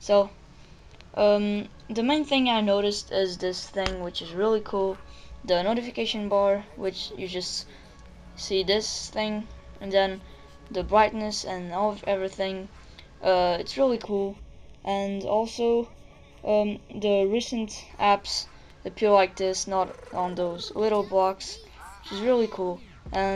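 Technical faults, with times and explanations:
14.04–17.9 s, channel delay (comb filtering): the sound turns hollow and phasey, with fixed notches starting around 1.5 kHz and repeating evenly upward, because one channel arrives roughly 0.3 ms late and cancels against the other when both are summed to mono.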